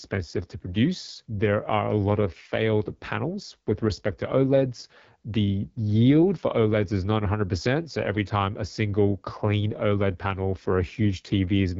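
From start to end, AMR wideband (HD Voice) codec damage: raspy, rough speech, consistent with its low 8.85 kbit/s mode; spectrogram shows a hard ceiling near 7.3 kHz.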